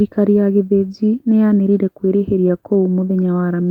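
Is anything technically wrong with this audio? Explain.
Yes. Between 2.41 and 3.44 s the speech shows repeated stalls (stutter): ten brief hiccups, none longer than 11 ms, together about 95 ms, roughly a tenth of that stretch. Packets reached the jitter buffer late or too slowly, so it kept running dry, and the receiver stretched the preceding sound to bridge each wait. Nothing is actually lost, which separates it from packet-loss dropouts. The speech drags and trips rather than skipping ahead.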